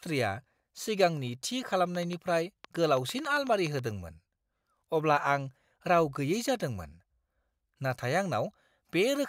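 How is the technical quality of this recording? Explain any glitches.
The recording has one clear glitch, a train of clicks running from 1.95 to 3.80 s. It's around fifteen sharp, similar pulses at about 7 per second, unevenly spaced and poking a few dB above the speech, likely from interference or a faulty connection. It comes across as an irregular ticking laid over the speech.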